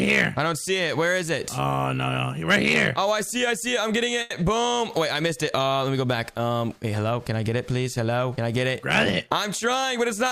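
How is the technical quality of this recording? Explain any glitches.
Two network-timing glitches affect the recording, one stall and one burst of time compression.

From 4.21 to 4.36 s there is a short stall from a late packet. The next packet had not arrived when playback needed it, so the jitter buffer ran dry and the receiver bridged the gap by extending the last sound for about 90 ms. Once the packet arrived, playback continued from the same point, so no audio is lost. The sound at that moment simply holds too long, with a faint buzz or slight dip where it was stretched.

From 9.27 to 10.29 s there is a jitter buffer speed-up. The buffer was holding more audio than its target, as happens when delayed packets arrive together. The receiver worked that excess down by cutting out many small pieces, each one or a few pitch periods long, one after another. Together they remove roughly 70 ms, so this second of audio plays at about 105% speed with the pitch unchanged and sounds slightly rushed.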